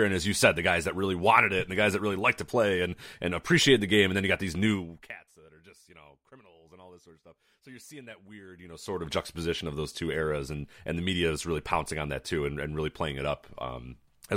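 Zipper noise appears from 4.71 to 5.20 s, after "then you got these", as the level drops by roughly 25 dB in about a hundred unsmoothed steps per second, and again from 8.47 to 9.11 s, after "so you're seeing that", rising back in roughly seventy steps per second. Each step clicks, producing a buzzy ticking. The waveform envelope shows a staircase, and the spectrogram shows evenly spaced vertical broadband lines.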